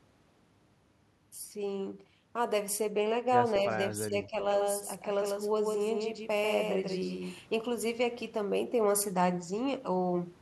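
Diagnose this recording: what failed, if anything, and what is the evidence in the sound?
Call processing: an echo leak at 3.70–3.77 s, a faint copy of the speech about 229 ms behind and roughly 30 dB down, likely an incomplete loudspeaker echo cancellation.

Call processing: speech suppressed in double talk from 3.95 to 4.35 s, with the voice dipping by around 15 dB for about 200 ms in total, likely echo suppression acting on both talkers.

Capture or editing: a doubled audio track from 4.51 to 7.39 s, a dry full-band copy around 150 ms late and about 5 dB quieter, starting and stopping abruptly, likely a second capture path.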